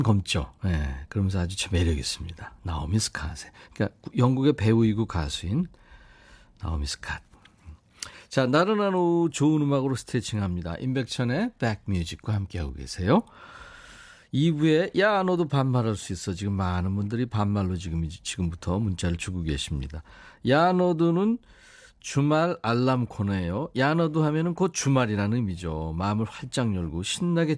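Nothing stood out as a technical problem on listening to this speech recording.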